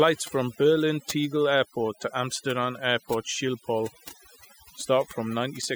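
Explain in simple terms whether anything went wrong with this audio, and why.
From start to finish, the background between phrases drops to an unnatural near-silence with small twinkling specks in it. That is overdone noise removal. A noise reduction tool was set too strong on a noisy recording, so it shut down any frequency range that seemed close to the noise. The softer parts of the voice were removed along with the noise.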